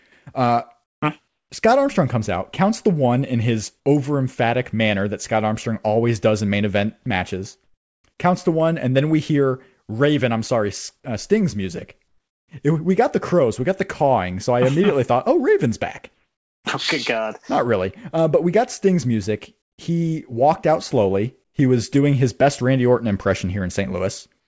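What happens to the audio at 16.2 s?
From 16.14 to 16.64 s, the real background drops out for half a second. In its place sits steady, featureless hiss at the same level. That is comfort noise in place of the background. It is likely from discontinuous transmission, with the receiver synthesising noise during a pause.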